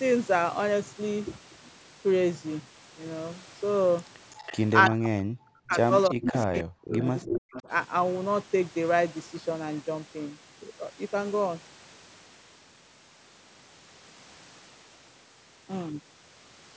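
A speech recording with echo leak at 4.31–4.6 s, 5.69–5.75 s, 6.04–6.43 s, 6.91–7.39 s and 7.55–7.63 s. A delayed copy trails the talker by 326 ms, unlike room reverb's smooth tail, and is likely residue from a loudspeaker the echo canceller missed. It sits about 5 dB below the speech at worst and about 20–25 dB below in the faintest scraps. The speech is suppressed in double talk at 4.9–5.75 s, 6.1–7.07 s and 7.24–7.68 s. The talker's level plunges by roughly 40 dB. These are not clean dropouts, since they coincide with the echo activity, and the echo canceller likely ducked both signals together.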